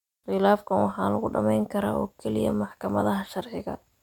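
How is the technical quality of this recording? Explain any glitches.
No technical glitches can be heard anywhere in the recording, and the signal stays steady and intact throughout.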